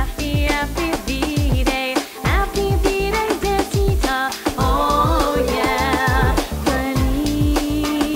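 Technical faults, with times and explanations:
Throughout: low bit depth with dither. A constant, even hiss sits under the whole clip, roughly 20 dB below the sound itself, with no gritty distortion or pumping as the level changes. The signal has been stored with very few levels, and the hiss level points to about 6 bits. Random dither was added before rounding, so the rounding error spreads out as steady white noise instead of harsh distortion that follows the signal.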